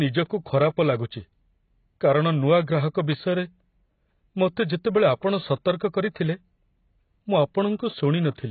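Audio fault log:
Throughout: AAC compression, likely at a very low bitrate, around 16 kbps. There's nothing above 4.7 kHz, so the speech sounds dull and smeared. The heavy damage gives sibilants a warbly, smeared fizz where the coder starves bands it judges less audible.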